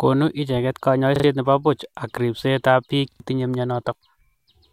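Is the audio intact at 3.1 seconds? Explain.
No. From 3.12 to 3.2 s the speech stutters: a short slice sounds three times in a row with a hard join at each repeat. This is a repeated buffer. New audio arrived late, so the last buffer, consistent with 40 ms, was replayed, and about 70 ms of speech is lost.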